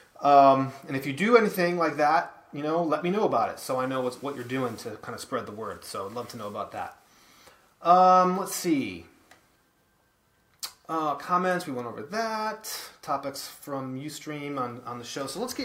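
Nothing stands out here as a technical problem; the audio holds steady all the way through with nothing that catches the ear.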